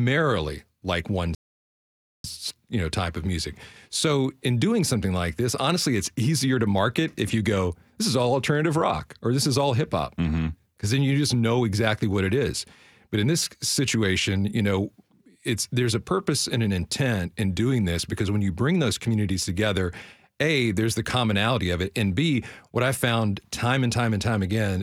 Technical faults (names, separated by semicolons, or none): rebuffering stall